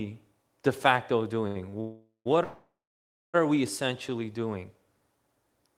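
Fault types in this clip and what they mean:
Short stall from a late packet: after "de facto" a sound is briefly held too long, twice, while the jitter buffer waits for a late packet.
Call audio freeze: twice before "are we" the sound trails into a fading buzz then silence, about half a second then nearly a second, likely from delayed packets.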